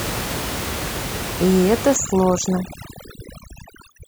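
From 1.96 s to the end, overdone noise removal takes hold: frequency bands near the estimated noise floor are pulled far down, so the room noise, about 10 dB below the speech beforehand, drops and breaks up into twinkling specks. Unlike plain low-pass dullness, the speech's quiet detail drops out.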